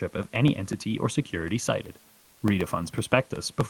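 From 0.11 s to the end, a regular tick breaks into the speech every 0.125 s, eight times a second, each a tiny gap of silence. These are periodic USB or driver dropouts: something stalls the audio interface on a fixed schedule, and a sliver of signal vanishes each time.

Between 2.19 and 2.41 s, a 220 ms stretch, the room background, about 35 dB below the loud speech, turns smooth and featureless and dips by about 1 dB. This is likely comfort noise in place of the background, generated at the receiving end while the sender's discontinuous transmission paused.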